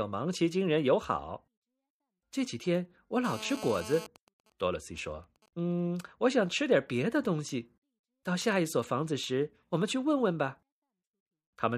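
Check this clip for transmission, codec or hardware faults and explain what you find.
There's hardware interference here, in the form of a nearby 2G handset getting into the audio circuit. From 3.25 to 4.07 s there's GSM phone buzz: the phone's 217 Hz transmit bursts get rectified, giving a harsh, raspy buzz at about -13 dB under the speech. Then, from 4.16 to 5.72 s, come GSM signalling bursts, fainter at around -30 dB, as the same phone sends only sparse burst groups while its talker is silent, giving even ticks with a longer 217 Hz buzz twice a second.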